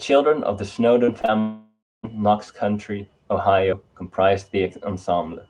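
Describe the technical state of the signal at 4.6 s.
At 4.6 s the speech signal is intact, carried through the WebRTC call path with no fault present at that moment.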